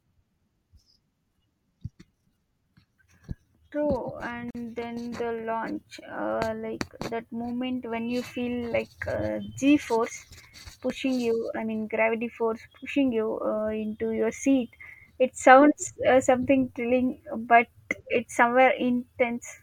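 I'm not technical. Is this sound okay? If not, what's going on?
No. At about 4.51 seconds, just before "then the launch uh", the speech stops dead for about 43 milliseconds and then carries on. This is a gap at a join of encoded pieces: the recording was saved in separate parts and stitched together, and each part kept a little leftover silence at its edges. Unlike a dropout, where a piece of the sound goes missing, nothing here is lost. The speech picks up exactly where it paused.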